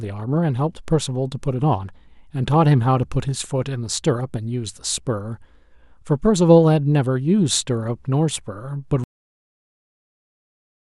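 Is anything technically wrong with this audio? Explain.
Yes, there's a cut-off end. At 9.04 s the speech stops dead mid-sound and drops straight to digital silence for the rest of the clip, with no natural decay. The final buffers were never written out, so that tail never played.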